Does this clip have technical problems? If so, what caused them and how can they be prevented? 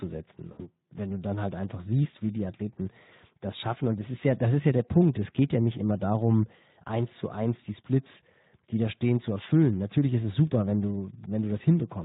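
Yes. Speex codec damage runs throughout: at about 11 kbps the CELP coder starves its excitation, giving hoarse, noisy speech rather than the warbly, swirly artefacts of transform codecs. Use a higher bitrate or a modern codec such as Opus.

VoIP packet loss concealed by the speech codec occurs from 0.51 to 0.72 s. About 80 ms is missing, which fits four 20 ms frames, and the decoder stretches the last pitch and filter into a fading buzzy tone or coloured noise instead of leaving a silent dropout. Prevent this with a larger jitter buffer, forward error correction or a more reliable network path.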